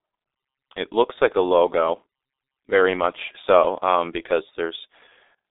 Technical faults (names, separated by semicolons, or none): G.723.1 codec